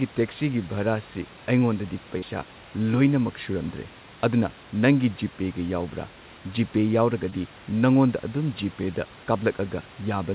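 At 2.18 s and 7.30 s, short concealed packet loss replaces 40 ms, then 20 ms, of missing speech with extrapolated sound, heard as brief smears.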